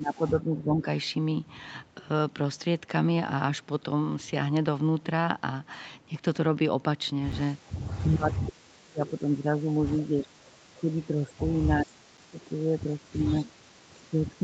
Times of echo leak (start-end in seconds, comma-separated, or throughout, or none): 9.06-9.11, 12.39-12.44